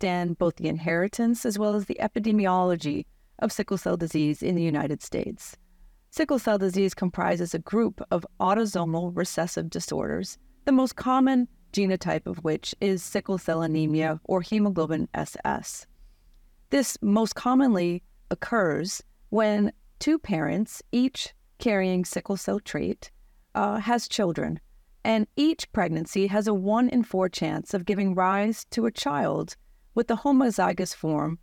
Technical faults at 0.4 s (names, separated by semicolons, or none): none